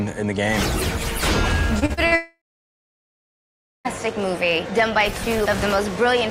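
From 1.79 to 2.13 s the audio turns choppy, the signature of repeated packet loss (robotic sound). Four short holes, the longest about 43 ms, are each patched by stretching the preceding sound, so roughly 41% of that third of a second is filler. What separates this from a single dropout is the rhythm: brief breaks keep recurring, with real sound returning between them. Right after, from 2.15 to 3.87 s, comes what is likely a long network dropout. The last sound carries on briefly as a fading buzz or hiss, then about 1.5 s of silence follows before the audio resumes with the missing stretch simply gone. Unlike the stuttering before it, this is one continuous gap of about 1.7 s, too long for concealment to cover, so it decays to nothing instead of staying patched.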